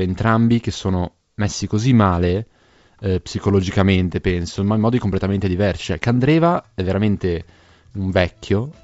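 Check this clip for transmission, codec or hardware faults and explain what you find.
Nothing stood out on listening to this speech recording, which comes across as ordinary G.722 wideband telephone audio at 64 kbit/s.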